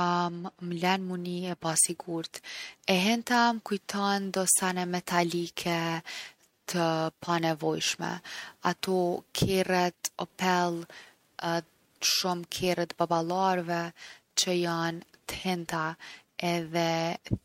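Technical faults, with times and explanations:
Nothing stood out on listening to this speech recording.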